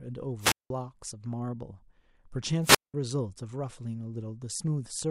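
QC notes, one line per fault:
0.39–0.70 s: wireless microphone squelch dropout. The radio signal fades and hiss rises. The receiver's squelch then mutes the output for about 185 ms before the speech returns.
2.62–2.94 s: wireless microphone squelch dropout. The same fade recurs. Static builds, the squelch gate closes for about 192 ms, and the speech comes back after the hole.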